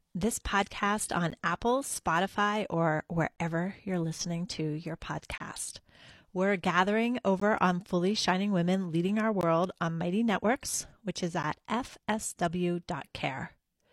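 Gaps between stream segments occur at 1.30, 3.36 to 3.38, 5.38 to 5.40, 7.40, 9.41 to 9.43 and 11.43 s. Each is a hard-edged silent hole of 12 to 24 ms, spaced about 2 s apart, which fits 2-second segments whose timestamps leave small gaps that the player fills with silence.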